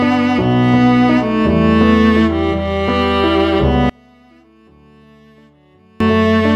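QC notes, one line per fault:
3.90 to 6.00 s, one channel inverted: the sound suddenly drops by about 34 dB to a faint copy. That's likely one side flipped in polarity, so the shared centre content cancels when the channels are summed to mono, leaving only the faint left-right difference.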